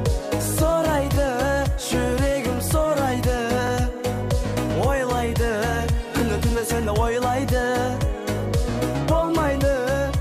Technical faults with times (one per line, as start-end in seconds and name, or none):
1.15-1.17 overlapping chunks
3.67-3.69 overlapping chunks
6.19 overlapping chunks
8.71 overlapping chunks